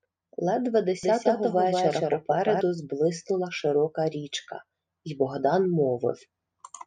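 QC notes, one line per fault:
1.03–2.61 s: doubled audio track. A dry, equally loud copy trails about 200 ms behind, switching abruptly, likely from a slower second capture path. It starts just before "зблиснула широка річка й".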